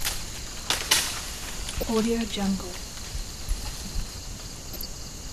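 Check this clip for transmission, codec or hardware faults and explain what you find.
Two faults are present: lossy sub-band coding throughout, and two bursts of reception damage on top of it.

MP2 compression runs through the whole clip. The top end is dull, with a gurgling, granular edge, likely from MPEG Layer II coding at a low rate that fits around 80 kbps. Too few bits forces upper sub-bands off and leaves the rest coarsely quantised. A spectrogram shows a ragged ceiling with high bands flickering in and out.

DAB burbling occurs from 1.57 to 1.90 s and again from 4.49 to 4.86 s. Bit errors at a fraction of a percent get past error correction and corrupt samples and scale factors, so single sub-bands get short blips of noise or jump in level for up to a frame. The bursts hit 14 and 15 frames. A spectrogram shows blocky, isolated bright patches.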